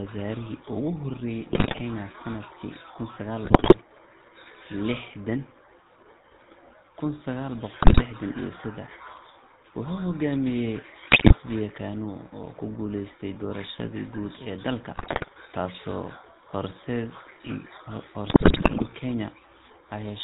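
The whole clip runs through the GSM full-rate codec, and you can plainly hear it: a buzzy, gravelly roughness from the pulse-driven vocal tract model, with nothing above 4 kHz. The thin, grainy character fits the 13 kbps full-rate coder.

On top of that, there are GSM bit errors at 1.52–1.81 s (just before "sanadkii kun"), 3.44–3.75 s, 7.82–8.02 s, 11.10–11.34 s, 14.94–15.29 s and 18.30–18.89 s. Corrupted filter, pitch and gain values bend the spectrum frame by frame into squawks, pops and gargling. The last burst runs longest.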